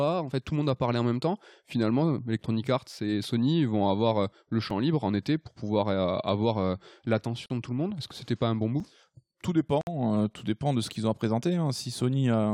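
Speech with two kinds of technical fault. Blocks of digital silence occur, likely where the output buffer went unfilled, cutting the audio abruptly to silence: a 3 ms hole at 4.70 s, between "vont avoir le" and "libre en été pour", and a 5 ms hole at 8.80 s, each heard as a tick or dip. There are also gaps at joins of encoded pieces, where separately encoded segments were spliced without trimming encoder delay and padding, opening smeared silences of 42 ms at 7.46–7.50 s, just before "de tout le monde", and 58 ms at 9.81–9.87 s, just before "tout dépend de ce".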